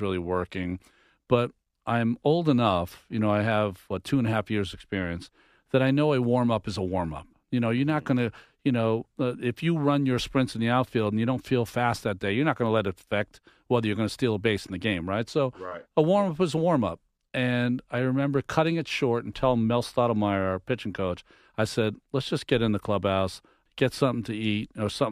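No technical faults can be heard anywhere in the recording, and the speech signal stays steady and intact throughout.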